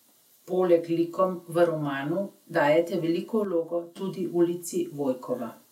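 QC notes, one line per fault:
3.45–3.96 s, one channel drops out: the speech level falls abruptly by about 6 dB for roughly half a second, then snaps back to its previous level with no fade in either direction. The likely cause is one side of a stereo feed going silent while the pair is summed to mono. The content shared by both channels is left at half amplitude, and anything carried only on the lost side vanishes until that channel returns.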